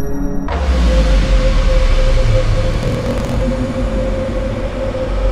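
From 2.69 to 3.42 s a block size mismatch (truncated) drops the tail of each block, which fits a 1024-sample read. A 43.1 Hz buzz results, and the sound runs 1.12 times fast at roughly normal pitch. A spectrogram shows vertical striations every 23 ms, and the waveform shows matching step discontinuities.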